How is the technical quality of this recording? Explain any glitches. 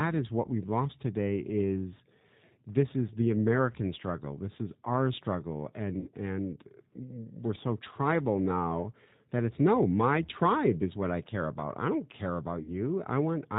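Technical quality is limited, with a constant codec coloration and two short dropouts.

Throughout, the speech carries plainly audible G.729 codec damage, consistent with an 8 kbit/s stream. Each frame is rebuilt from a vocal-tract filter and a few pulses, so the speech sounds rough and synthetic. On a spectrogram, nothing appears above 4 kHz.

From 6.00 to 6.08 s, between "is our struggle" and "and we're so tribal", about 60 ms of audio was lost. The VoIP packet loss was concealed by the speech codec, which extended the last pitch and filter with falling gain. This produces a fading smear, a buzzy tone or a coloured noise, that shows a decaying envelope in the waveform.

At 12.62 to 12.75 s, just after "about I don't care", a second concealed loss of about 40 ms gives the same kind of fading smear. Recovery is weak for a moment afterward because each frame builds on the last.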